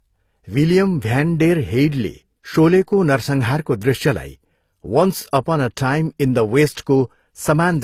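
Transcoding between lossy codecs runs through the whole speech clip: nothing sounds above about 15.7 kHz, and two distinct sets of coding artefacts are layered together, which likely points to a low-bitrate HE-AAC encode later re-encoded to Opus, each stage adding its own damage.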